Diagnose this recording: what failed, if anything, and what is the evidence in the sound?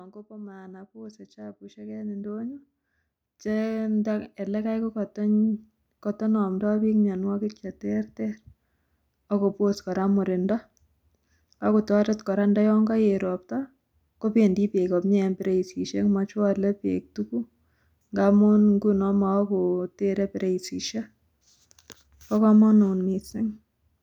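Automatic gain rising from 0.27 s to 5.08 s, at the call-processing stage. Over those five seconds the speech and the background noise floor swell upward together, climbing by about 17 dB in a smooth ramp rather than a step. That shared, gradual rise is the signature of an automatic gain control judging the input too quiet and slowly raising its gain. A louder talker would lift only the speech, not the background with it.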